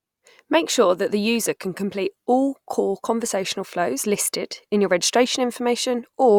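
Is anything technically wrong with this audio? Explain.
No, no technical faults heard.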